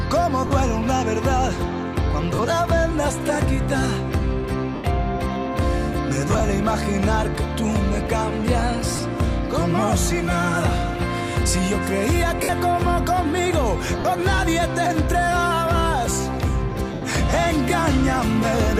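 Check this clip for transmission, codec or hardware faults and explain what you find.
Bluetooth link dropouts are the problem: lost LE Audio frames at 0.47–0.51 s, 2.35–2.39 s, 4.75–4.84 s, 6.28–6.40 s, 8.96–8.99 s, 12.43–12.49 s, 14.00–14.05 s and 16.94–17.02 s. The gaps run 30 to 90 ms. The one at 6.28 s is broken into short pieces of about 30 ms at most. The radio link dropped packets, and the LC3 decoder filled each gap by repeating the last spectrum with scrambled phase, fading it as the gap continued, which fits 10 ms frames. Tonal parts of the sound therefore smear into brief noisy hiss rather than cutting to silence. The light lossy compression underneath is not a fault.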